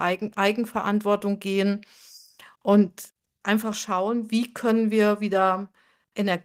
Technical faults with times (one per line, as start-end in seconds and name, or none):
none